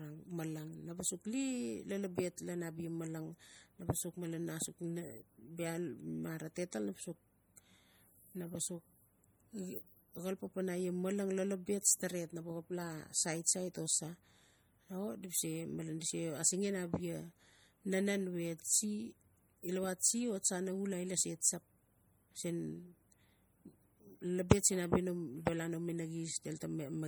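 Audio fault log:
Throughout: MP3 compression, likely the cause of a plainly audible watery, swirling texture on the speech, with chirpy metallic edges on s sounds and smeared consonant onsets, which fits a low bitrate near 48 kbps. Weak frequency lines drop in and out from frame to frame, so the grain shifts constantly. Unlike a plain low-pass filter, content still reaches about 20.7 kHz; unlike noise-reduction artefacts, the swirl tracks the speech rather than the background.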